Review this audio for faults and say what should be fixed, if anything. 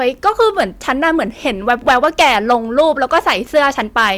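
Hard clipping runs through the whole speech clip. The signal is driven about 8 dB past what a stage can pass, so the loudest peaks, a small share of samples, are sliced flat, adding high harmonics heard as crackle and edge on loud syllables. Prevent it by lowering gain before that stage, leaving several decibels of headroom.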